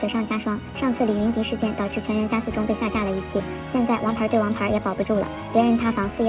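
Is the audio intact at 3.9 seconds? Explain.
Yes, the audio is intact at 3.9 s, with nothing dropped, clipped or distorted there beyond the narrow telephone-band sound of the call path, which carries nothing above 4 kHz.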